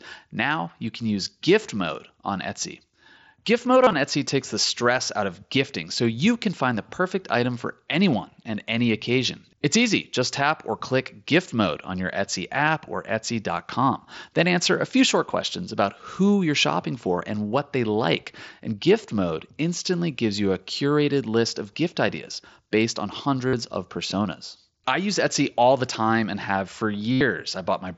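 Brief buzzy, held-tone patches at 3.84–3.93 s, 12.66 s, 23.48–23.53 s (after "gift ideas based on") and 27.12–27.21 s (after "time and have for") are concealed Bluetooth headset packet loss, where lost packets were filled by repeating recent waveform.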